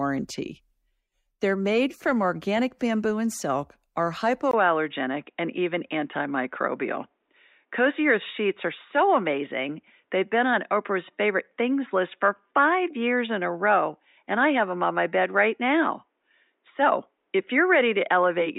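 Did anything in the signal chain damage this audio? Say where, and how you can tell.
Yes, the input likely switched to a poorer device at 4.51 s, after a 20 ms gap. From there to the end, speech loses everything above 3.8 kHz and turns dull, with a faint new noise floor about 55 dB down but no obvious level jump.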